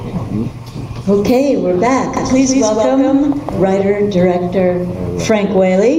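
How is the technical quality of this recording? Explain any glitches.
The recording is compromised by gain pumping throughout. The level swings by around 15 dB, squashing the dynamics. The likely cause is excessive input gain with a fast limiter or compressor clamping down on peaks.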